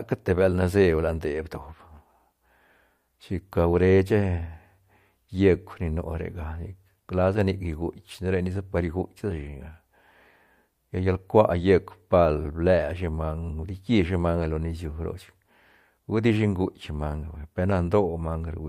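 No technical faults can be heard anywhere in the recording, with the signal holding steady throughout.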